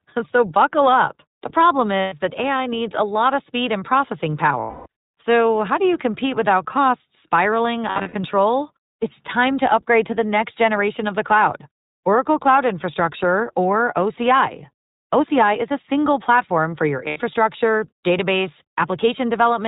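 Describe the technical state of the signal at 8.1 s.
At 8.1 s the signal sits inside a burst of lost iLBC frames running from 7.90 to 8.15 s. About 180 ms of audio is missing across that quarter second, in short gaps, the longest under a tenth of a second. The decoder fills each gap by repeating the last pitch cycle blended with noise, so the speech turns into brief held, buzzy, slightly breathy vowel sounds and recovers almost at once when real frames return. On a spectrogram these gaps look like smeared, static harmonic stripes in place of normal formant movement. On the waveform they look like repetitive, slightly decaying periodic patches.

The whole passage, this moment included, also carries plainly audible iLBC codec damage. The audio is band-limited to narrowband, with nothing above 4 kHz, and has a rough, synthetic texture; the codec codes each frame's excitation independently. 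This fits 20 ms frames at the 15.2 kbps mode. A spectrogram shows a hard ceiling at 4 kHz.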